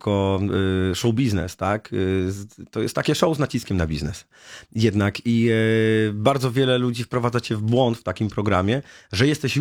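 No technical faults can be heard anywhere in this audio; the signal holds steady and intact throughout.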